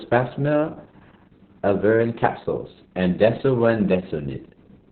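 From start to end the speech carries heavy Opus voice compression in SILK narrowband mode, which fits a bitrate around 6 kbps. Coarse excitation coding and the narrowed band make it muffled, hoarse and faintly robotic, and a spectrogram shows a flat, empty ceiling above 4.4 kHz.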